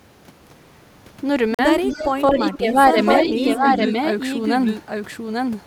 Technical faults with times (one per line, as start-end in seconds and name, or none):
1.54-1.59 Bluetooth stall
1.86-2.12 echo leak
2.14-2.74 speech suppressed in double talk
2.49-2.58 echo leak
3.01-5.67 doubled audio track
3.23-3.66 speech suppressed in double talk
3.72-3.90 echo leak